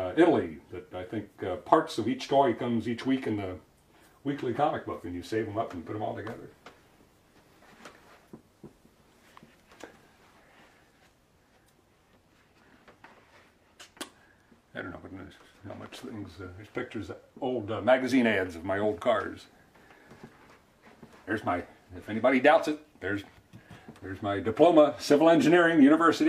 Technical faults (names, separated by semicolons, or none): none